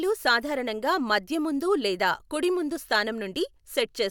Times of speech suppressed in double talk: none

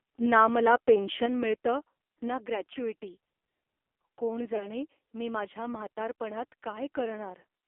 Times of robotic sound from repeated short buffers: none

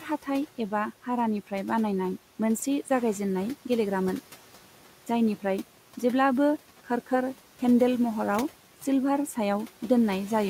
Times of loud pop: none

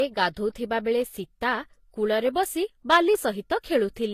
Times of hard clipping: 2.92-2.97

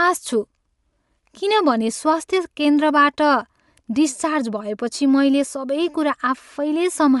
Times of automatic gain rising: none

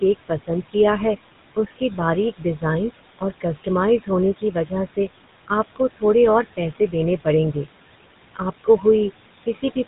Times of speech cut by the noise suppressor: 0.01-0.75, 1.55-2.63, 3.19-6.02, 6.57-7.67, 8.36-8.85

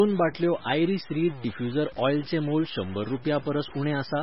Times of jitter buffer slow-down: none

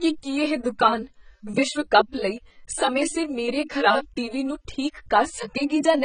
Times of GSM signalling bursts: none

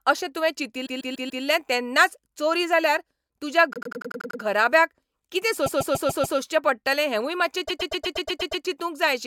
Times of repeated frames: 0.85-1.43, 3.73-4.41, 5.65-6.37, 7.67-8.63

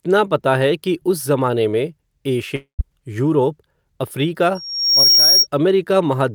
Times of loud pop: none

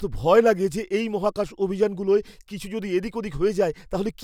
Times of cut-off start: none

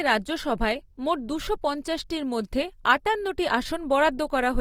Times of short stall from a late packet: none

